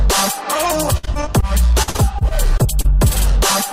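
From 0.97 to 1.44 s, then 1.82 to 2.86 s, repeated packet loss chops the sound. Missing stretches, up to about 58 ms, are patched by stretching previous audio, giving a robotic stutter.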